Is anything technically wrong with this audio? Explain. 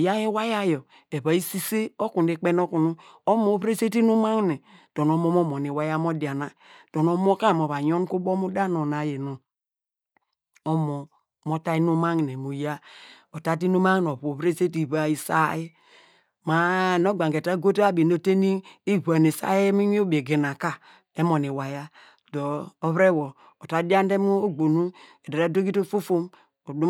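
No, there's nothing technically wrong here that I can hear; this speech recording holds together without any problems worth pointing out.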